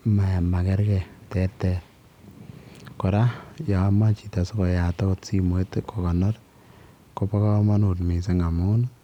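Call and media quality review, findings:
No call or media quality findings to report for this speech clip.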